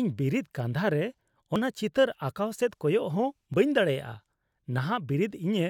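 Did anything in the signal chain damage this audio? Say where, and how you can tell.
Yes, at the playback stage: an overlap between stream segments produces tiny skips at 1.56 s and 3.54 s, about 2 s apart, matching the segment length. Trimming the timestamp overlap removed a few milliseconds of speech, so the waveform jumps forward with no silent gap, unlike a network dropout.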